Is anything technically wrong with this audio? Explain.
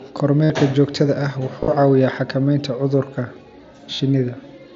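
Yes. Brief buzzy, held tones at 0.44–0.50 s, 1.60–1.68 s (scattered, longest run about 45 ms) and 3.94–4.00 s come from concealed Bluetooth headset packet loss: lost mSBC packets were filled by repeating recent waveform.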